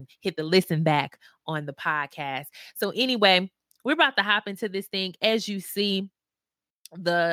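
Nothing stood out on listening to the speech recording.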